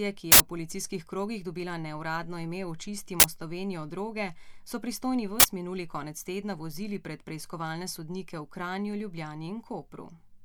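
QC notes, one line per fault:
0.32–0.40 s, uninitialised buffer: an 80 ms block plays before any audio was written into it, so stale memory comes out as a loud burst of digital noise just before "v policijskih krogih dobila".
3.20–3.24 s, uninitialised buffer: a 40 ms burst of the same harsh noise right after "krogih dobila neuradno ime", where leftover memory contents were read as samples.
5.40–5.44 s, uninitialised buffer: another 40 ms noise burst between "droge so pristojni" and "minuli konec tedna vozili", again from a block output before it was filled.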